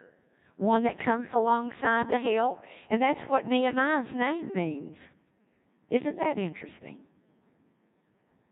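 From start to finish, the speech has passed through the Codec 2 vocoder. The original waveform is gone. Only pitch, voicing, energy and a rough spectral envelope survive. The decoder rebuilds the voice from sine waves. The damage is heavy, which fits a very low rate of about 1.6 kbit/s. The result sounds robotic and buzzy. Vowels have a synthetic hum. Natural texture and detail are lost.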